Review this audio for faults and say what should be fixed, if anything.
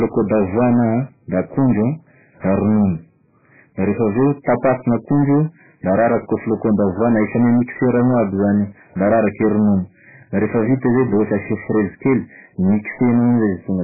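Hard clipping runs through the whole speech clip: the level is driven about 10 dB past full scale, so roughly a tenth of the samples are cut flat, giving a harsh fuzz on every loud syllable rather than the swirl of codec damage.

Throughout, nothing is heard above 2.5 kHz, and what remains sounds watery and warbling, with smeared consonants. The likely cause is heavy MP3 compression at a bitrate near 8 kbps. The swirl distinguishes it from a plain low-pass filter.

To prevent both, lower the gain before conversion to leave headroom, and encode at a much higher bitrate or store the audio losslessly.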